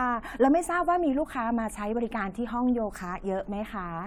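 Nothing stood out as a technical fault on listening to this speech recording.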